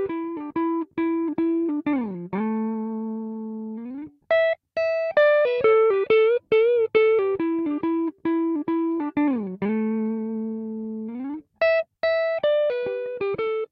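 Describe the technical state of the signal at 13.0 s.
At 13.0 s the signal is intact, with no audible fault at that moment.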